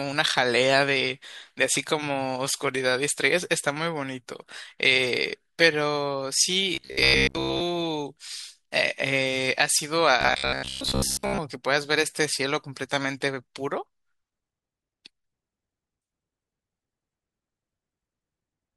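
Audio most likely arrived too slowly to keep the buffer filled, so the software kept repeating the last short block while most of the real speech was skipped. This produced robotic sound from repeated short buffers at 6.75–7.62 s and 10.21–11.40 s. The repetition locks the speech onto a rigid, metallic buzz at 66.7 Hz, which fits a repeated block of about 15 ms, and it only loosely follows the words.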